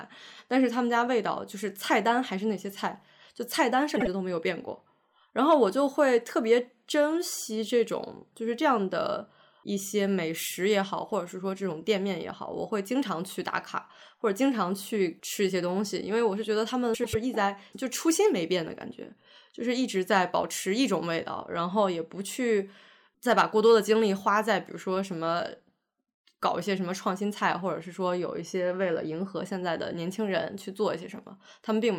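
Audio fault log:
3.96–4.07 s: frames out of order. Two adjacent 48 ms blocks of speech are swapped, which fits a pair of two-frame runs decoded in reversed order. The stretch plays its second half first, so it comes across as a brief garbled flutter. No time is lost.
16.94–17.15 s: frames out of order. The same exchange happens with two 96 ms blocks, pointing to four-frame runs. The longer blocks make a longer jumbled stutter.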